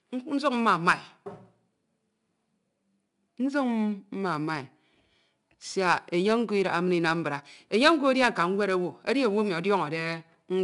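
Speech carries 4-bit ADPCM compression throughout: a gritty hiss that rises and falls with loudness, unlike steady background hiss, and no content above 10.7 kHz, which points to a sample rate near 22 kHz at 4 bits per sample.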